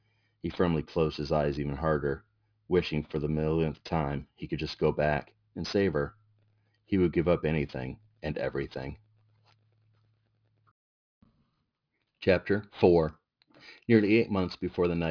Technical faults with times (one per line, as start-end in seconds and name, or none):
0.00-15.11 aliasing